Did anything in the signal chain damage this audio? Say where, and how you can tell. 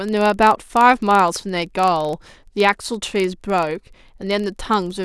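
Yes, there's a block size mismatch (padded) in the driver or buffer stage, and it runs the whole length of this speech. There's a steady buzz at about 23.4 Hz under everything, which fits a reader pulling 1024-sample blocks while the writer hands over slightly fewer. Each block's shortfall gets zero-filled, so a tiny gap repeats at the block rate. The speed ratio is 0.999, so the slowdown is negligible and the pitch sounds right.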